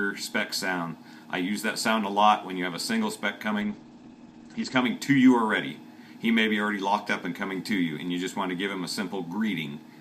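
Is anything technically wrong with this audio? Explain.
Yes. From 3.65 s to 4.87 s there is a call bitrate drop. The connection's bandwidth estimate fell and the encoder was forced onto a much smaller bit budget, which fits a fall from around 128 kbps to about 12 kbps. It stays at the lowest rate for about 1.1 s. The audio turns coarse and muffled as the top end vanishes. On a spectrogram, energy above 8 kHz abruptly disappears where it previously reached 20 kHz, then returns at 4.87 s.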